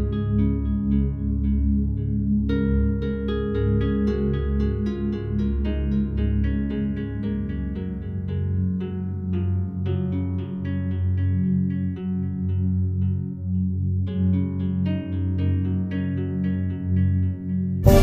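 Nothing stood out as a technical problem on listening to this recording.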